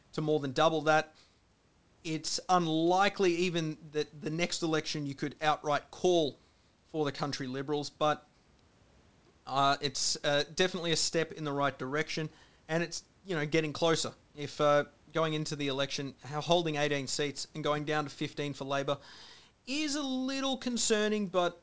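No technical faults heard.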